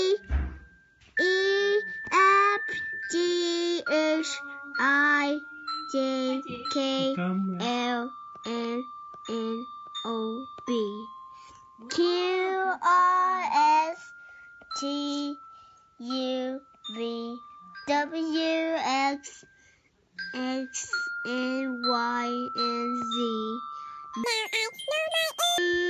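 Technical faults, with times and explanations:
24.24 to 25.58 s, wrong sample rate: The sound suddenly runs twice as fast and jumps a full octave higher. Playback is running at double the recorded rate with no conversion, which points to 16 kHz material played at 32 kHz.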